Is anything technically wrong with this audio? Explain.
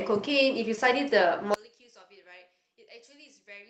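Yes, two faults. At 0.75 to 0.79 s a brief smear is short concealed packet loss: about 20 ms of audio never arrived and the receiver synthesised a fill. From 1.54 s to the end the speech collapses, dropping about 29 dB to a faint residue. The likely cause is one channel inverted, so the centred voice cancels when the channels are summed to mono.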